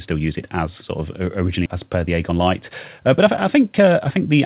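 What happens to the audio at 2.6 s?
At 2.6 s the speech is in the middle of a jitter buffer speed-up running from 1.75 s to 4.35 s. With too much audio queued, the receiver repeatedly cut out pitch-period-sized slices, about a third of a second in total, so delivery runs about 9% fast and sounds hurried. Unlike a tape-style speed-up or resampling, the pitch stays unchanged. Through the telephone-band path, nothing above 4 kHz is heard.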